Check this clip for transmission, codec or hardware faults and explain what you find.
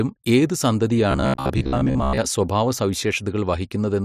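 One fault is present. From 1.11 to 2.18 s the speech becomes a rigid metallic buzz near 67 Hz, robotic sound from repeated short buffers, likely a 15 ms chunk replayed while most incoming audio is skipped.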